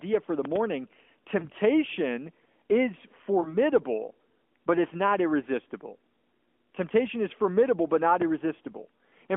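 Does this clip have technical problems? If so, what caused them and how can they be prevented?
Yes. There are loud pops and lost AMR speech frames. At 0.45 to 0.58 s, just after "for the", two loud pops sit about 15 dB above the speech. A single pop follows at 8.22 s, after "is formidable but not". The speech runs on underneath. A likely cause is an electrical transient from a plug, switch or static discharge. Secure connections and grounding, and avoid switching gear while recording.

The lost AMR speech frames come at 1.40 to 1.45 s and 3.42 to 3.57 s. Each is one lost 20 ms frame in this narrowband phone audio. The decoder fills the gap by reusing the last good settings at falling gain, so the speech briefly dips or warbles. Stronger radio coverage and better channel error protection prevent this.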